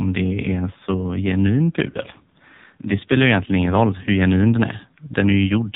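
From start to finish the speech passes through the AMR narrowband mobile codec. Nothing above 4 kHz survives, so the sound is dull and boxed in. The damage is heavy. Each 20 ms frame rebuilds the voice from a vocal tract model and a few pulses. At this low rate that leaves a buzzy, synthetic edge. The sparseness points to one of the lowest AMR-NB modes, near 5.9 kbps.

At 1.90 s, just after "så genuin", lost AMR speech frames cut in. The gap lasts about 40 ms, to 1.98 s, which fits two failed 20 ms frames. The decoder fills it by repeating the last good pitch and vocal tract settings at falling gain. The sound smears and sags briefly. Then the voice returns a little weak and rough.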